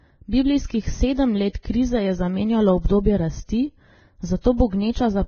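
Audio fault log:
Throughout: Vorbis compression. The speech is hissy and grainy, with nothing above 6.5 kHz. The likely cause is heavy low-bitrate Vorbis coding, consistent with about 17 kbps, which cuts the treble and quantises the remaining detail so coarsely that it turns to noise.
1.53 s, 1.63–1.65 s, 4.41–4.44 s: pre-echo. A short hiss of 17 ms, 25 ms and 33 ms comes just before sharp onsets, the second just before "je zamenjalo". Quantisation noise sized for each attack spreads back across its transform block into the quiet moment before it, softening the attack.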